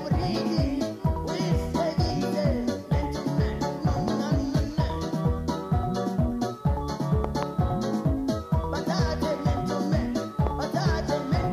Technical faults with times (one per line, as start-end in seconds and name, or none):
4.08-4.10 loud pop
7.24-7.45 loud pop
10.47-10.49 loud pop